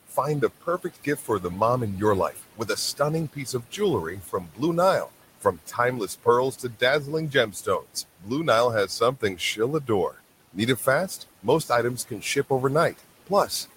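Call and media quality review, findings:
Noise suppressor artifacts, throughout. Residual room noise pumps down between phrases and back up under speech. The suppressor estimates steady noise per band, frame by frame, and pulls those bands down by about 17 dB. That removes most of the room noise, which sits about 18 dB below speech, but leaves the unevenly gated remnant audible.

Speech cut by the noise suppressor, 0.08–1.44 s. Soft consonants and word tails sound swallowed, roughly 0.4 s of speech in total, dipping by up to about 16 dB. The suppressor misreads low-level speech as noise and attenuates it.

2.32–8.30 s. The same swallowing, worse and longer, with about 1.5 s affected in total and drops of up to about 18 dB. Quiet speech energy falls under the noise estimate.

8.87 s to the end of the clip. Recurring faint or swallowed endings, with drops of up to about 16 dB. The same misclassification continues.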